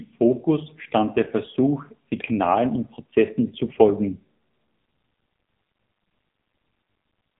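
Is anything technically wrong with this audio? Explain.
Yes. AMR narrowband mobile codec damage runs through the whole clip. The speech is rebuilt from a coarse vocal-tract model fed by sparse pulses, so it sounds heavily buzzy and synthetic, which fits a low rate around 6.7 kbps. Nothing passes above 3.8 kHz, leaving a thin, muffled telephone tone.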